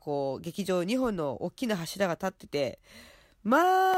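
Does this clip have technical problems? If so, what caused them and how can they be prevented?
Yes. From about 1.94 s to 3.94 s, short ticks recur every 1.0 s, roughly three in all. These are periodic USB or driver dropouts: something repeatedly stalls the USB bus or audio driver, and each time around a millisecond of speech is lost and replaced by silence. Their strict one-second spacing distinguishes them from random clicks or irregular buffer underruns. Prevent this by disabling USB power saving and stopping background tasks that poll the bus.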